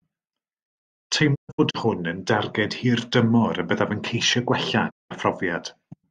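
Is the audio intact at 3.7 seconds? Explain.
Yes, the speech at 3.7 seconds is intact, with no audible dropout, click, distortion or other fault at that moment.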